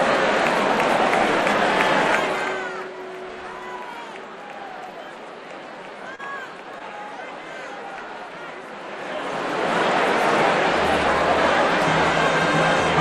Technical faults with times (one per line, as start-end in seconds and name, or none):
6.15-6.20 short stall from a late packet